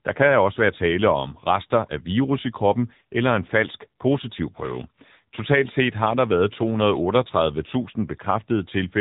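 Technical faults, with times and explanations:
Throughout, AMR narrowband mobile codec: the speech passed through the AMR-NB phone codec at a mid-range mode, consistent with roughly 8 kbps. Nothing above 3.8 kHz survives, and the sparse pulse-driven vocal-tract model leaves the voice plainly buzzy, muffled and synthetic.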